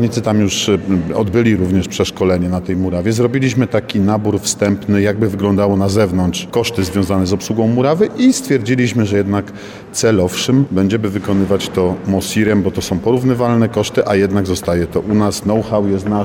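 No faults are audible anywhere in the recording.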